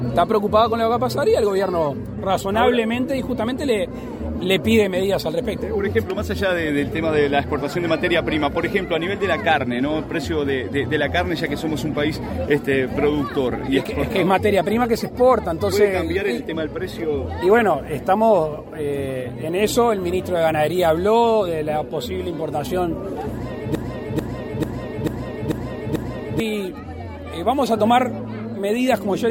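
The stream likely stalled at 23.75 s, resending its last 0.44 s fragment six times until 26.4 s, a broken-record loop that replaces the audio due there.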